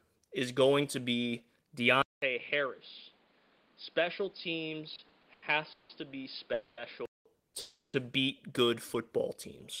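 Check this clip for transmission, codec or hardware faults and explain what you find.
Three kinds of fault are audible: an input switched to a poorer device, a run of repeated stalls (stutter), and two call audio freezes.

From 2.02 s to 7.26 s, just after "is going to be", the sound drops out for about 200 ms and returns duller and boxier. The level sits about 10 dB lower, and a new background noise runs about 30 dB beneath the signal. The likely cause is the input switching to a poorer microphone or a headset's call profile. It differs from a network fault because the change in tone and noise is steady for the whole stretch rather than coming in bursts.

Between 4.95 s and 5.91 s, the audio stalls five times. Each time the jitter buffer runs empty, the receiver stretches the last sound to fill the wait. The fills add up to 340 ms, about a third of that span, and the longest lasts 170 ms. 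Nothing is lost, but the sound drags and stutters. It differs from a freeze because it consists of many short, closely spaced holds rather than one long one.

At 6.53–6.79 s and again at 7.59–7.95 s, just before "beat good football", the sound hangs. The first freeze is a 240 ms continuation with no silence. The second lasts 340 ms, with its final 170 ms silent. The likely cause is delayed packets leaving the jitter buffer empty. Playback then resumes exactly where it stopped, so the lag grows by the length of each freeze and nothing is missing.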